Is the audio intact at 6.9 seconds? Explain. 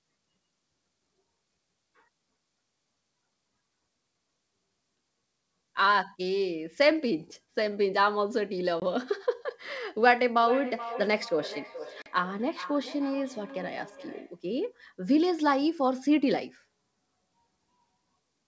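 Yes, at 6.9 seconds the speech is intact, with nothing wrong to be heard at that moment.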